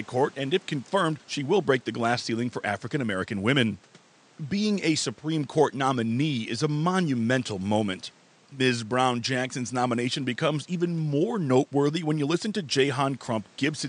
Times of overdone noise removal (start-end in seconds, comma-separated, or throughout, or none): none